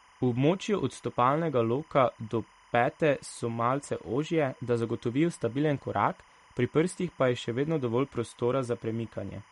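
From start to finish a timecode bleed runs under the speech: linear timecode at 25 frames per second leaking from a neighbouring line, its square wave flipping between tones near 1 and 2 kHz, sitting roughly 30 dB down. Unlike a steady hum or whine, it warbles and chirps rhythmically.

Also throughout, the speech sounds watery and swirly, with smeared consonant attacks and nothing above 11.2 kHz. This is likely MP3 compression, which fits a bitrate around 48 kbps. Weak spectral lines blink on and off between frames, which sets it apart from plain low-pass filtering.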